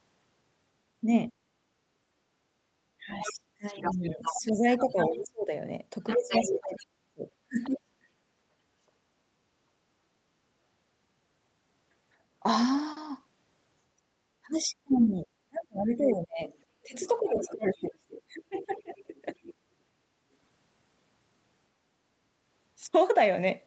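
It's a speech clip carried over a call, band-limited to about 8 kHz. From 2.03 to 2.7 s the background is gated by the echo canceller, with the room sound dipping by up to about 7 dB for around half a second while the loudspeaker plays. From 2.98 to 8.06 s and again from 13.97 to 19.26 s, the talker's speech ducks hard, roughly 35 dB and then 30 dB down, for about 3 and 4 seconds in total. That's likely speech suppressed in double talk. Over the same stretches a second voice comes through underneath, from 3.1 to 7.77 s at roughly 10 dB below the talker, then as a brief scrap at 14.93 to 14.97 s and from 16.02 to 19.54 s at roughly 15 dB down. That's likely the other side's voice leaking through past the canceller.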